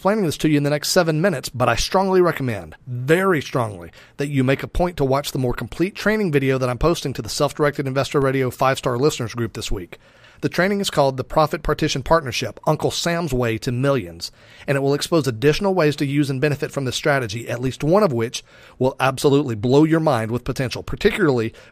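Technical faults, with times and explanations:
8.22 s and 17.67 s, DC step: the waveform's zero line abruptly shifts by about -20 dBFS, as from a converter recalibrating or an offset input switching in, then drains away through a 20 Hz high-pass. Each jump lands as a low thump beneath the unchanged speech.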